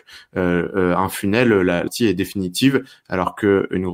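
The clip is speech with compressed frames skipped. Right after "un funnel", at about 1.87 to 1.92 s, the audio jumps ahead. Around a third of a second of sound is simply gone. The decoder never played a run of compressed frames, either because they were missing or because it rejected them as damaged. The size of the gap suggests roughly fifteen frames of 20 ms each.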